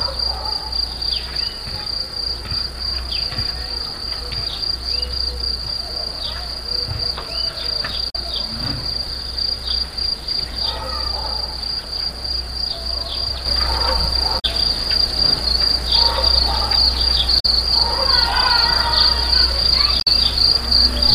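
At 8.06 to 8.16 s, damaged data in the compressed stream makes the decoder misread frames and resync, giving a brief glitch, seen as a smeared broadband blotch. At 13.46 s a sudden gain jump of about 6 dB lifts sound and background together until the end, likely an unramped gain change, shown as a step in waveform height. The same stream damage recurs at 14.36 to 14.45, 17.36 to 17.46 and 19.97 to 20.07 s.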